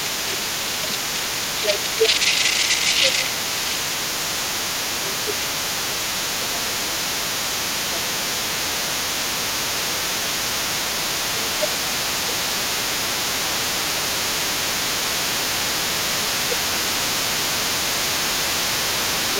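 From the start of the clip to its end, a second voice runs underneath the main talker at a level only a few decibels below it. This other side's voice leaking through is likely far-end audio from the device's loudspeaker that the echo canceller failed to remove from the microphone signal. It therefore sits in the same channel as the talker and competes with the talker's speech throughout the recording.

The talker's own level repeatedly sags while that second voice is present, in five stretches: 1.61 to 7.32 s, 7.92 to 10.33 s, 11.34 to 14.02 s, 16.0 to 17.31 s, and briefly at 19.36 to 19.39 s. Most dips reach about 5 dB, and the deepest, about 10 dB, falls in the 11.34 to 14.02 s stretch. Within each window the reduction comes and goes in pieces rather than holding steady, totalling roughly three seconds in the first stretch and one to one and a half seconds in the next three. This is speech suppressed in double talk. 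The canceller likely could not separate the near talker from the loudspeaker echo when both were active, so it attenuated both.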